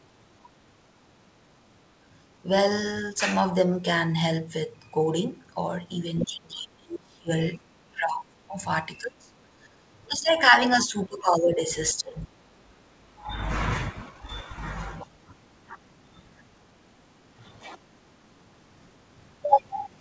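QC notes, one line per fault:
6.23–7.42, 7.79–8.56, 8.97–9.34, 9.52–10.6, 10.8–11.7, 11.92–13.44 and 14.1–14.28 s: speech suppressed in double talk. The voice dips by up to about 30 dB and breaks up. This is likely an echo canceller ducking the near talker while the far side speaks.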